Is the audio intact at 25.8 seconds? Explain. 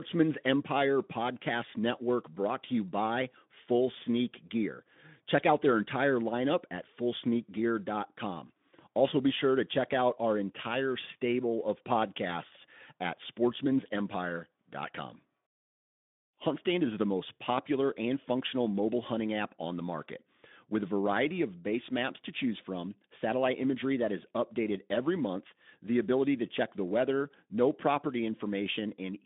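Yes, the audio is intact at 25.8 s, with no dropout, glitch or other fault at that moment.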